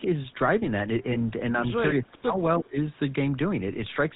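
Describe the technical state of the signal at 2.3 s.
At 2.3 s the speech is sitting inside a dip from 1.99 to 2.79 s. It looks like speech suppressed in double talk, likely from an echo canceller that couldn't separate this talker from the far-end echo while both sides spoke and so clamped down on everything. The level sags by roughly 25 dB at its deepest, and the voice thins and drops out in patches across most of that stretch.

Right on top of that, from 2.31 to 2.34 s, you get GSM bit errors. Corrupted bits reached the decoder, so the filter, pitch or gain values it rebuilt were wrong for a moment. That produces a short squawky, gargled blip, which fits a couple of damaged frames on a marginal radio link with a bit error rate somewhere under one percent.

Underneath both, the GSM full-rate codec is audible the whole way through. It rebuilds the voice from a vocal-tract model driven by a sparse pulse excitation, so the speech has that buzzy, gravelly roughness and nothing above 4 kHz. 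The damage is plain enough that it fits the 13 kbps full-rate coder rather than a later GSM codec.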